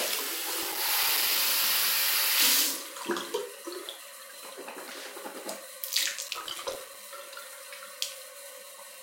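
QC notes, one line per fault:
6.11–6.95 s: processor overload crackle. For just under a second a gritty, tearing crackle rides on the sound, then stops abruptly as the load clears. The processor could not fill its audio buffers on time, and dozens of deadlines were missed in quick succession. Each miss drops in a short hole of silence, around a few milliseconds long, with hard edges at both ends. Packed this tightly, those clicks fuse into one continuous rough burst.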